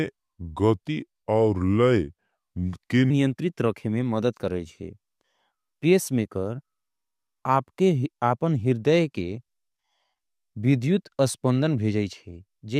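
A speech clip whose opening, from the start to 3.10 s, comes out deep and dragging before it snaps to normal pace just ahead of "रखे में मदद करेजे". That opening is a section at the wrong speed: it plays at 0.825 times its recorded rate, so pitch and tempo fall together, the pitch by about three semitones. The likely cause is that this stretch was resampled or played against the wrong clock, stretching it out.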